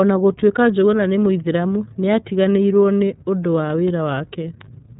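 From start to end the speech has passed through the iLBC codec, a narrowband VoIP coder that rebuilds the excitation of each frame on its own rather than predicting it from the last. The frame pacing fits 30 ms frames at roughly 13.33 kbps. Nothing survives above about 3.8 kHz, so sibilants and breath lose their edge, and the damage is plainly audible as a rough, slightly synthetic grain over every syllable.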